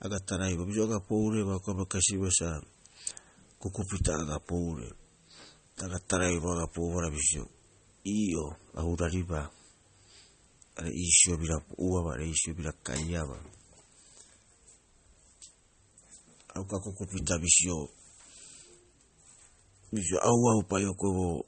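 From start to finish the speech carries plainly audible MP3 compression. Nothing sits above 8.4 kHz, so the treble is lopped off and the s sounds lose their air. Under that, faint detail comes and goes between frames, giving the voice a watery, swirly edge with a metallic chirp on sibilants. It's likely an encoder starved for bits, which fits a low bitrate around 32 kbps.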